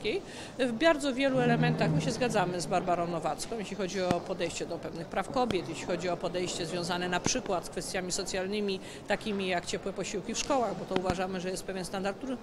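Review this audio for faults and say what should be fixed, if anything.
A sudden voltage step, likely from a plug, switch, static discharge or driver glitch, enters the signal path and is heard as loud pops around 20 dB above the sound. Single pops occur at 4.11–4.13 s and 5.51–5.53 s, and double pops at 7.26–7.48 s and 10.96–11.12 s. Secure connectors, avoid switching or plugging equipment while recording, and ground the setup against static.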